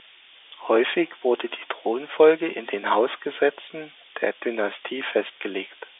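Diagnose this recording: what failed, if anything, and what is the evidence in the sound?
A steady, thin hiss runs through the whole recording, rising sharply toward the top of the band and sitting only about 5 dB below the speech, so it nearly rivals it. This is low bit depth with noise shaping at the sample-format conversion stage. The sound points to roughly 4 bits, with the rounding error pushed upward in frequency rather than left flat. The telephone path itself passes a 300 Hz to 3.6 kHz band.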